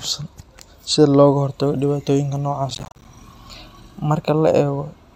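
From 2.70 to 3.05 s, right after "hortago dhibaatooyinka", the speech breaks into a gritty burst of crackle, torn by rapid hard-edged dropouts, and it clears once the passage ends. This is processor overload crackle: the processor fell behind and missed buffer deadlines many times in a row, roughly twenty of them. Each miss left a short hole of silence, consistent with buffers of around 10 ms, and the abrupt cuts at either edge produce the clicking texture.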